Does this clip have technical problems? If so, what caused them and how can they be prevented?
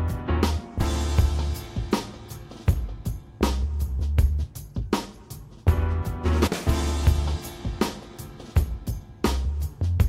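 Yes. At 6.46 to 6.48 s the sound jumps forward. These are compressed frames skipped: about a tenth of a second, roughly five frames, was missing or rejected as damaged. Verifying file integrity and using error-protected transport prevents this.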